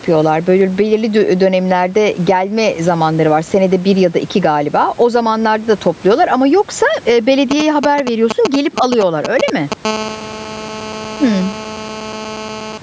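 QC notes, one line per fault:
Throughout, gain pumping: the gain swings by around 10 dB. Loud and soft passages sit unnaturally close in level. The likely cause is input gain set far too high, with a fast limiter clamping each peak.
7.51–9.74 s, GSM signalling bursts: just after "topluyorlar ama yoksa eee", a galloping dit-dit-dit of brief buzzes appears, roughly as loud as the speech. A nearby 2G phone is signalling in short radio bursts, which the audio circuit rectifies into 217 Hz pulses.
9.85–12.78 s, GSM phone buzz: a hard, raspy 217 Hz buzz with many harmonics runs steadily to near the end, about 16 dB below the speech. A nearby 2G phone in an active call pulses 217 times a second, and the audio circuitry rectifies each pulse into sound.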